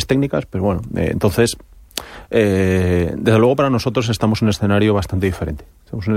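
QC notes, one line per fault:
3.42–5.42 s, timecode bleed. A faint chirping warble sits behind the speech for two seconds. It is linear timecode leaking in, a square wave flipping between pitches near 1 and 2 kHz. It runs at 30 frames per second, roughly 40 dB below the speech.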